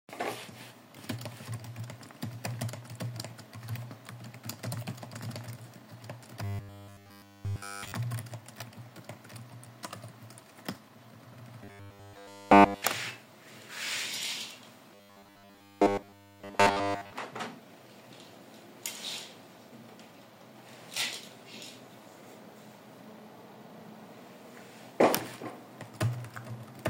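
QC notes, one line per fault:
6.44–7.92 s, 11.64–12.82 s and 14.95–17.13 s: robotic sound from repeated short buffers. A rigid, metallic 100 Hz buzz replaces nearly all the sound, likely from one 10 ms chunk looping while new audio is skipped.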